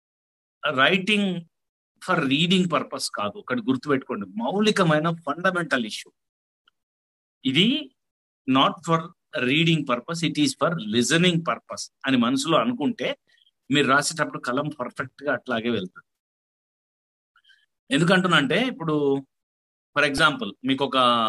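At 20.18 s there is a repeated buffer. New audio failed to reach the output in time. The device replayed its last block instead, four extra times, so one tiny slice sounds five times in a row. Each slice lasts about 1.33 ms, which fits a 64-sample buffer. Repeats that short do not register as a stutter. They fuse into a brief click or buzz with hard joins. About 5 ms of the real audio is lost.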